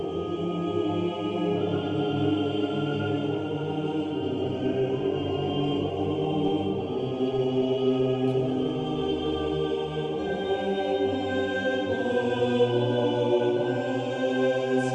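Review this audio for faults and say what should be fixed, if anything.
From 4.37 s to 9.63 s there is a call bitrate drop. The audio turns coarse and muffled as the top end narrows from 20 kHz to 12 kHz. That fits the encoder being starved from around 64 kbps to about 18 kbps for roughly 5.2 s. Prevent it by giving the link more bandwidth headroom and tuning the congestion controller so that it lowers the bitrate less sharply.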